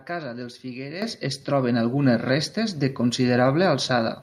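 Microphone volume stepped up at 1.02 s in this speech clip, between "casa dels" and "es troben": the call software judged the input too quiet and raised the device's input volume in one step, so voice and background noise jump together by about 10 dB mid-sentence.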